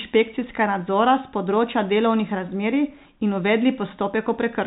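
No faults: the speech sits in a normal G.711 A-law telephone channel, with nothing above about 3.8 kHz.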